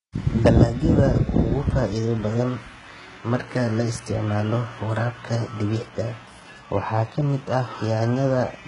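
HE-AAC compression, heard throughout the speech, is the likely cause of a treble that sounds bright but false. The upper spectrum is not coded directly. It is synthesised by copying lower bands upward and shaping them with a coarse envelope, and nothing survives above 11 kHz. The damage is heavy, which points to a very low bitrate around 12 kbps. Sibilants come out gritty and lispy, with a metallic sheen where the rebuilt harmonics fail to line up with the real ones.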